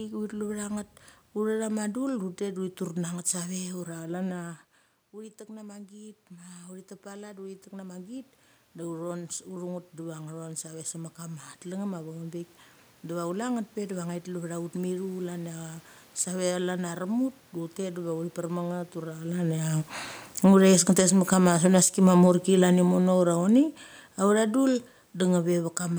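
Automatic gain rising runs from 5.11 to 12.5 s. Shortly before, at around 4 s, the talker moves back and the voice drops by about 16 dB at the microphone. The gain control reads the input as too quiet and raises its gain by about 12 dB over roughly seven seconds. The voice climbs back slowly, and the room noise swells with it, so the background audibly rises behind the speech.

Automatic gain falling follows from 20.3 to 25.67 s. Around 19 s the talker moves. The gain control responds by pulling its gain down by about 11 dB over the next five seconds. The speech starts out loud and then sinks gradually, and the room noise sinks with it. That shared fade in the background marks a gain change in the system rather than a further movement by the talker.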